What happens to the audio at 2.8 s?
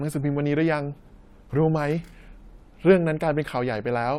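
Nothing goes wrong at 2.8 s; the speech plays through that moment intact, with no dropout, click, distortion or other fault.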